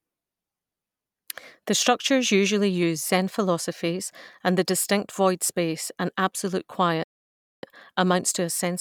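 At 7.04 s the speech halts in a playback stall, going silent for about 0.59 s until 7.63 s. The player likely ran out of buffered data or was blocked. Unlike a brief dropout, this is a sustained half-second silence that breaks the flow of speech.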